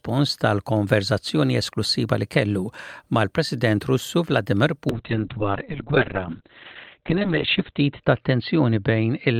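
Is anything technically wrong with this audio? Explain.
Yes. From 4.91 s to the end there's a call bitrate drop. The encoder, starved of bits, codes coarsely and cuts everything above 4 kHz, so the sound turns rough and muffled, which fits a fall to about 6 kbps.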